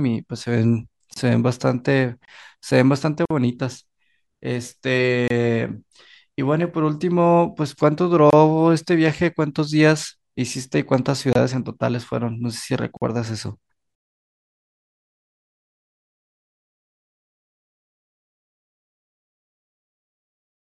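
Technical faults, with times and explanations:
1.14 s, 3.25 s and 12.97 s: gap at a join of encoded pieces. Silences of 25, 50 and 47 ms break the speech. Untrimmed encoder delay and padding cause them, and the speech resumes where it stopped.
2.25 s to 11.35 s: gap between chunks. A 25 ms hole recurs every 3 s, at 2.25, 5.28, 8.30 and 11.33 s, where chunks meet. No sound is lost.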